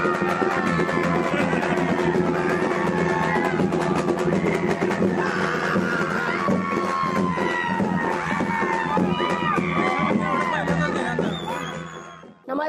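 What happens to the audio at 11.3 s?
At 11.3 s the sound carries overlap-add ripple, which runs through the whole clip rather than starting there. The audio was split into windowed frames and rejoined with an overlap whose gains don't sum evenly, so the level dips and swells by about 6 dB once per frame, around 100 times a second. That gives a rough, buzzy flutter. Unlike added hum, it modulates the sound's own level and vanishes in silence instead of sitting under it as a steady tone.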